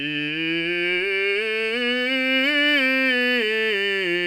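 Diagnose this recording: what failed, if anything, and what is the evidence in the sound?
Nothing in this music recording points to a failure at any stage of the chain, from wiring and conversion through to storage and playback.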